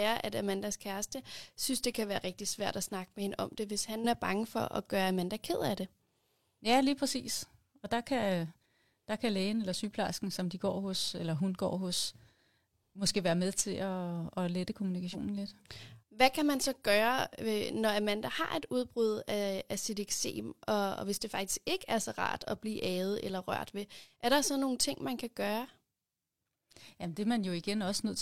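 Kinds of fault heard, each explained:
Damaged data in a compressed stream: corrupted bytes in the coded speech made the decoder misread those frames and hunt for the next valid frame header. Just after "at lette", from 15.10 to 15.15 s, the sound breaks into a brief glitch.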